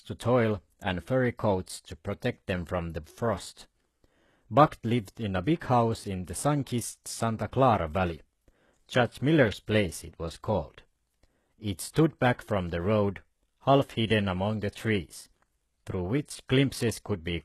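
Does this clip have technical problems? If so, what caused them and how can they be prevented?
Yes. Right through the speech there's a band-limited, synthetic top end: nothing comes through above about 12.3 kHz, and the s sounds have that gritty, lispy, metallic edge. That's likely HE-AAC compression at a very low rate, something around 16 kbps. At that rate the encoder spends its bits on the lower spectrum and fakes the treble by copying lower bands upward, so the upper harmonics don't line up with the real ones. To prevent it, encode at a higher bitrate or use plain AAC or Opus at a comfortable rate for speech.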